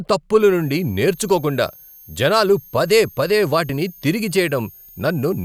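From 0.40 s onward, a switching supply whistle sits under the speech. Audible burst-mode switching leaks in as a faint tone drifting between 6.37 and 6.63 kHz.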